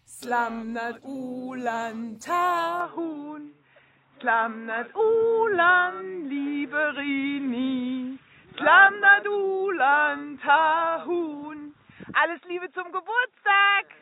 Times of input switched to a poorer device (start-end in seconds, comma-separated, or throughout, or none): 2.80-14.02